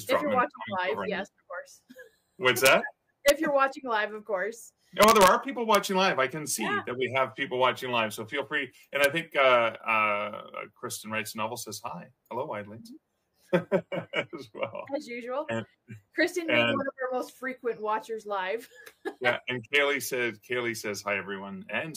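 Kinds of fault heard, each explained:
Integer overflow: loud peaks wrap past the integer limit and flip sign, giving sharp cracks near 2.66, 3.28, 5.02 to 5.28, 5.75 and 9.04 s.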